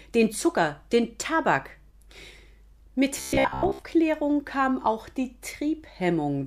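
From 3.18 to 3.85 s, the speech turns into a rigid, metallic buzz near 66.8 Hz. This is robotic sound from repeated short buffers. Most of that stretch is repeats. The likely cause is audio arriving too seldom, so a 15 ms chunk loops in place.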